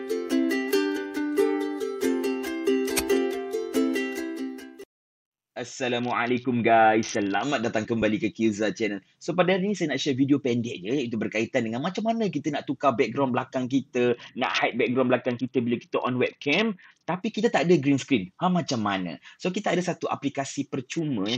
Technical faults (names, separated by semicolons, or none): Bluetooth SBC bit pool drop